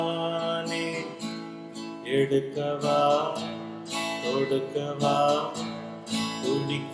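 No technical faults are audible.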